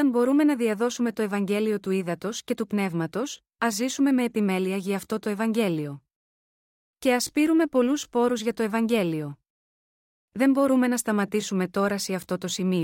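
No technical faults can be heard anywhere in the speech.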